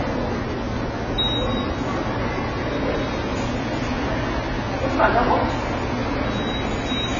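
AAC compression runs from start to finish. Nothing survives above 7 kHz, and the damage is heavy, most likely from AAC-LC coding at a very low bitrate around 16 kbps. Too few bits for its frequency lines leave the sound dull, smeared and warbling.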